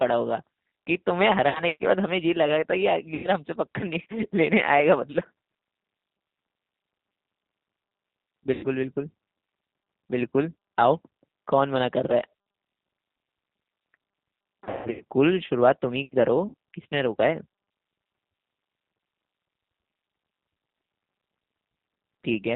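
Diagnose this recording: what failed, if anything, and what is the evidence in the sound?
G.729 coding runs through the whole recording, a codec-stage fault. The speech is bandlimited with nothing above 4 kHz, and it carries a plainly audible rough, synthetic edge. At 8 kbit/s the decoder rebuilds each 10 ms frame from a vocal tract filter, a pitch predictor and a handful of pulses rather than the waveform itself. The coarse excitation is what gives the speech its buzzy texture, and the narrowband sampling is what removes the top octave.

VoIP packet loss concealed by the speech codec occurs at 1.49 to 1.62 s, 3.15 to 3.30 s, 8.54 to 8.67 s, 14.64 to 15.03 s and 16.48 to 16.54 s, a network-stage fault. The losses are 60, 90, 90, 270 and 60 ms. The 14.64 s event is scattered over 360 ms, with a longest gap of 150 ms. At each one the sound smears into a fading buzzy or noisy tone as the decoder extrapolates from its last pitch and filter. 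Because its state has to rebuild, the speech stays weak briefly after the packets return.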